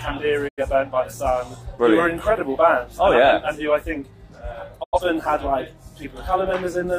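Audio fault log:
0.47–0.63 s and 4.82–5.00 s, digital broadcast dropout: the sound fades out over about 20 ms, goes silent, then returns, and whatever played in each gap is gone. The receiver muted on corrupt or missing data, and each 85.3 ms hole fits two lost frames.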